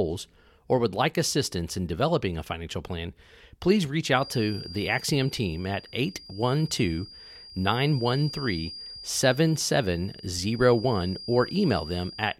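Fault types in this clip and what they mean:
Feedback whistle: from 4.10 s to the end of the clip, a thin, steady tone at 4.8 kHz sits behind the speech, around 20 dB below it and swelling and fading slowly in level. The likely cause is a loudspeaker-to-microphone loop with its gain just at the edge of instability, so that single frequency keeps recirculating and sustaining itself without building into a runaway howl.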